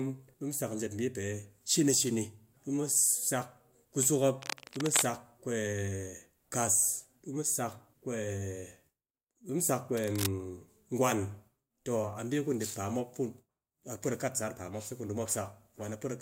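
A rough, rustling scratch breaks over the speech from 4.40 to 5.05 s and again from 9.95 to 10.26 s, only slightly quieter than the voice. This cable scratch noise likely comes from a worn cable or connector being moved, its contact resistance jumping erratically.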